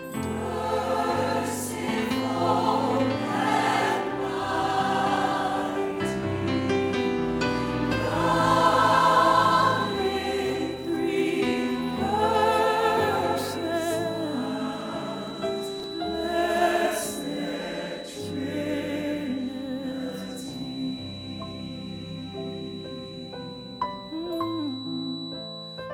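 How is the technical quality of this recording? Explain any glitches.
The recording has one glitch, a brief case of chunks out of order between 15.80 and 15.84 s. A single 10 ms block arrived late and plays three blocks after its proper place, so that 40 ms stretch is reshuffled rather than missing. The three hard joins give a quick jumbled flutter. Unlike a dropout or a repeated chunk, no audio vanishes or doubles. The same material is just briefly heard in the wrong sequence.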